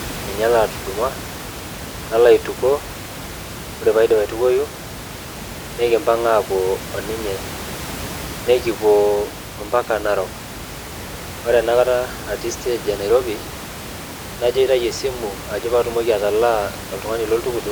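No technical faults can be heard in the speech recording, and the room's own background noise sits about 13 dB below the speech as part of the recording itself.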